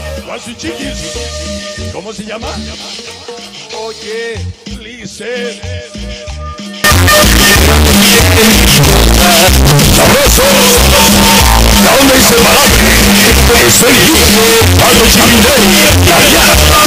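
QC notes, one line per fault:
6.84–16.87 s, signed and unsigned mixed up: from 6.84 s to the end the audio turns into a wall of very loud, harsh distortion, with quiet stretches blaring as hard as everything else. The likely cause is 16-bit samples being read with the wrong signedness, flipping the top bit, so every crossing through zero becomes a leap from one extreme of the range to the other.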